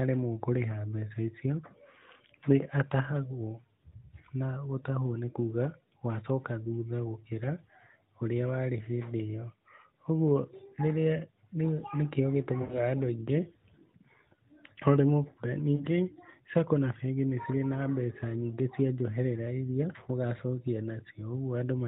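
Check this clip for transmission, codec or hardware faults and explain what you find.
Two short dropouts from lost AMR speech frames, at 12.62 to 12.81 s just before "andũ aingĩ" and at 15.76 to 15.85 s just after "maremwo kwoya". The decoder concealed the missing frames by extending the previous pitch and spectral envelope at falling gain. The first gap (80 ms, which fits four lost frames) smears and fades before the speech resumes, roughened. The second (40 ms) is shorter, also drawn out and fading. The AMR narrowband coding itself, likely at 12.2 kbps, only limits the audio to 4 kHz with light coding colour.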